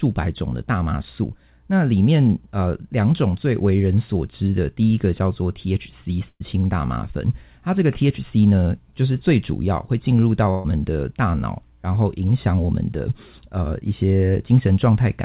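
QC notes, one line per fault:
6.28–6.42 s and 10.50–10.66 s, burst of packet loss: about 120 ms and 140 ms of audio go missing. The receiver stretches the last sound and fades it down, ending in 40 ms of silence the first time. Spectrogram: a flat smeared extension of the last sound, then a hard jump; waveform: a decaying continuation.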